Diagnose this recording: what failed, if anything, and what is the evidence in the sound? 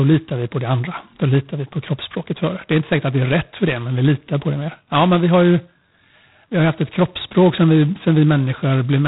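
G.726 ADPCM coding damage runs through the whole speech clip, placing the failure at the codec stage. The coder sends only a few bits per sample describing the difference from an adaptive prediction, so quantisation error is large. Here it is heavy: a harsh, rasping hiss rides on the speech and rises and falls with its level, which fits the coarsest 16 kbit/s mode. Nothing is heard above 3.8 kHz.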